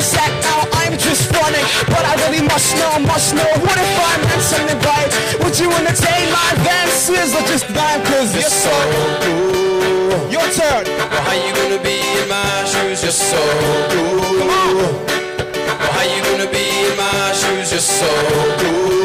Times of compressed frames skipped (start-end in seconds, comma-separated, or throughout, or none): none